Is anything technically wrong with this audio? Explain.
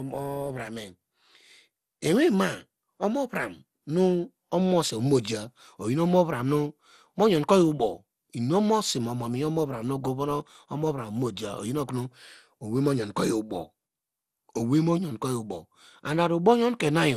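Yes. Generation loss runs through the whole speech clip, and its likely cause is repeated lossy re-encoding, around ten passes, with a character that points to MP2 at about 96 kbit/s. Each pass requantises the audio on a shifted frame grid, so coding noise and spectral gaps pile up. The result sounds swirly, smeared and hollow, with softened consonant attacks and nothing above 15.8 kHz.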